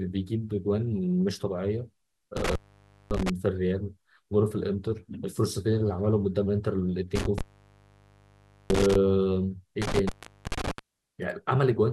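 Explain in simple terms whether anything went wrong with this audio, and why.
The speech cuts out three times because of an intermittent contact, where a loose cable or plug briefly loses its connection. This happens from 2.37 to 3.30 s (silent for about 0.56 s), from 7.15 to 8.95 s (about 1.3 s), and from 9.82 to 10.79 s (about 0.43 s). Each gap starts and ends with a crackle, and faint hiss fills it. A digital dropout would go cleanly silent with no crackle.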